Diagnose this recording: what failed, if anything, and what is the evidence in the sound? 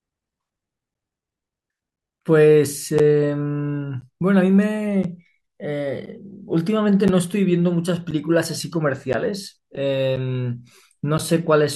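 The driver or buffer stage failed, with periodic USB or driver dropouts. From 0.94 s to 11.19 s the speech carries a regular tick roughly every 1.02 s, about ten in all, audible only where there is signal. Each tick is a gap of around 10 ms where the audio drops to silence. Something on the host is stalling the USB transfer or audio driver on a fixed cycle, so each blocked interval's samples never arrive.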